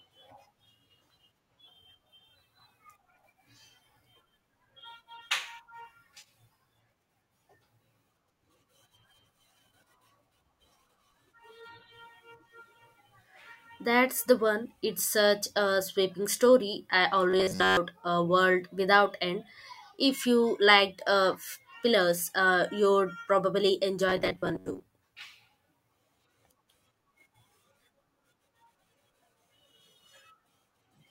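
From 17.30 to 17.77 s, and again from 24.09 to 24.95 s, the speech collapses into a rigid, metallic buzz near 93.8 Hz that follows the words only loosely. This is robotic sound from repeated short buffers, likely caused by a short segment of about 10.7 ms being looped while audio arrives too seldom. The repeats replace most of the first stretch and about half of the second. On a spectrogram, each stretch shows evenly spaced harmonics of 93.8 Hz, and the waveform shows a repeating, identical cycle.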